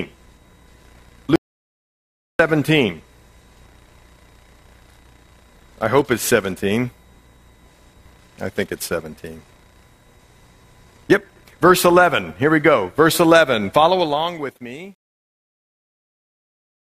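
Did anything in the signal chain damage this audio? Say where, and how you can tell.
Yes. At 1.36 s the sound stops dead, and everything is gone until it resumes abruptly at 2.39 s. That is about 1.04 s of audio lost. This audio dropout to silence holds plain silence, with no room tone or noise floor underneath. That points to the input side of the chain, likely a lost device connection or a driver or buffer stage that kept writing empty samples while nothing arrived.

The closing fade-out grows gritty from 13.9 s. Between 14.74 s and 16.96 s the tail is at its grittiest. This is truncation distortion on a fade. The gain or sample-format conversion stage drops low-order bits without dither, which fits about 10 bits of resolution. Near the bottom of the fade the waveform collapses into a few coarse steps.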